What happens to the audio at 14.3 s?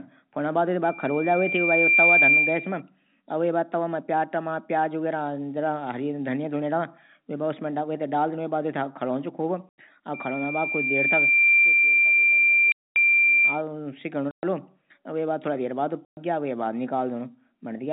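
At 14.31 s the speech drops out completely until 14.43 s. That is packet loss filled with silence. A run of audio packets never arrived, and the receiver played nothing in their place. The gap lasts 120 ms, which fits four lost packets of 30 ms each. Its edges are abrupt, so the cut-out and return are hard. Around the hole, the narrow telephone band of the G.711 coding can still be heard.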